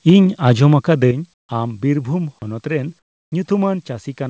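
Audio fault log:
0.10 s and 1.11 s, microphone volume stepped down: the voice and background drop together, abruptly, by about 3 dB and then by about 7 dB, with no fade. The likely cause is the call software lowering the microphone's input gain in single steps.
1.34–1.49 s and 2.99–3.32 s, comfort noise in place of the background: in these 150 ms and 330 ms pauses, the faint background turns into a flat, featureless hiss about 20 to 22 dB quieter. The likely cause is the sender pausing transmission while the receiver substitutes synthetic noise.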